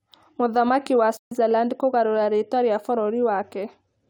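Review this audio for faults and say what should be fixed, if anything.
From 1.17 to 1.32 s the speech cuts to silence for about 140 ms and then resumes further along, as though it had kept playing underneath. This is a Bluetooth dropout, likely caused by audio packets arriving at the headphones too late and being discarded, a gap that fits a handful of lost packets. On a waveform it shows as a flat, abruptly edged hole; a spectrogram shows a blank vertical band across all frequencies. Reducing radio interference and distance, or raising the link's buffering, would prevent it.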